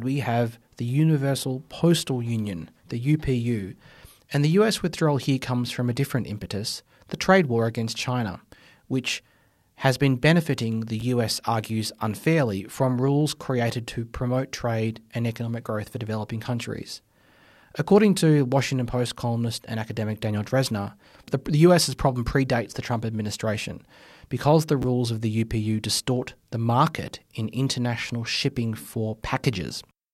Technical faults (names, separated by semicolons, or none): chunks out of order